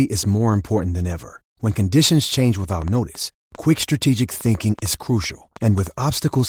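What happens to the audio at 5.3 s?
At 5.3 s you're inside a train of clicks that starts just after "conditions change" at about 2.73 s and runs to 5.88 s. It's around fifteen sharp, similar-shaped pops at roughly 4.8 per second, spaced unevenly, peaking about level with the speech, so they tick through pauses as well as over talking. Short pulses like that are likely coming from electrical interference or an interface hiccuping.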